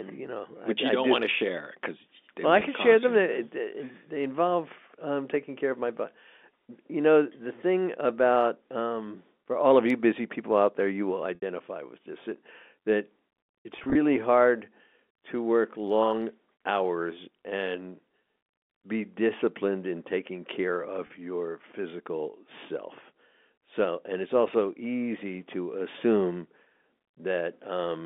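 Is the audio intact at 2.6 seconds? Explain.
No. At 2.60 s, right after "share because well I" and before "can share them", one packet of about 10 ms is lost. The receiver conceals the loss by packet loss with pitch repetition, replaying the last pitch period to fill the hole. A gap this short leaves a brief held, slightly buzzy tone rather than silence. A dropout would cut to silence or a click, but here the periodic buzz carries the voicing across the gap.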